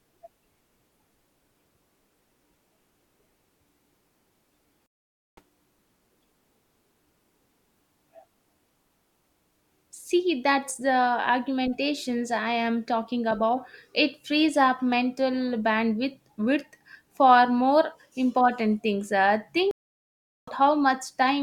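At 4.86 s the speech drops out for about 0.51 s, then picks up roughly half a second further on. That's a stream reconnect: the link broke and a fresh decoder joined mid-stream. It happens again at 19.71 s, with 0.76 s of silence and about a second skipped.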